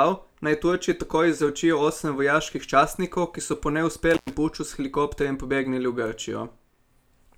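At 4.11 s, after "častnikov ki so po", an intermittent contact breaks the speech. A loose cable or plug briefly opens. The sound drops out for about 117 ms, with crackle at each edge and faint hiss in the gap. Speech resumes by 4.34 s, at "puču s helikopterjem".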